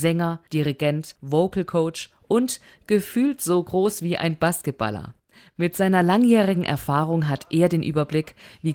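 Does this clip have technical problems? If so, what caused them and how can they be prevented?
No, nothing stood out on listening to this speech clip, so there is no cause to trace and nothing to prevent.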